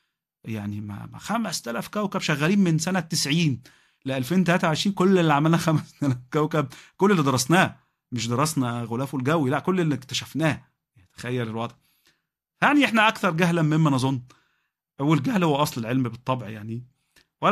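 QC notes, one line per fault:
Nothing stood out on listening to this speech recording.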